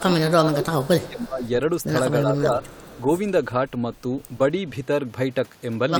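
An echo canceller that likely could not tell its own talker from loudspeaker echo while both sides spoke produces speech suppressed in double talk. It pulls the speech down by up to about 15 dB at 0 to 0.13 s, about 20 dB from 0.49 to 1.43 s, and about 10 dB from 2.27 to 2.62 s, leaving it dipped and fragmentary. Incomplete cancellation on a loudspeaker side likely causes the echo leak at 0.65 to 1.27 s and 2.63 to 3.01 s. A faint copy of the speech, about 25 dB below it and delayed by 312 ms, trails behind.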